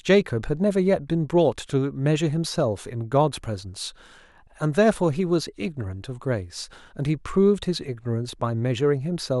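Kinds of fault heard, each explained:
No kinds of fault are heard in the speech.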